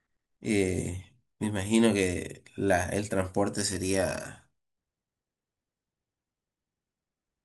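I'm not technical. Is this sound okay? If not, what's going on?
Yes, the recording has no technical faults: no dropouts, glitches or interruptions at any point in the speech.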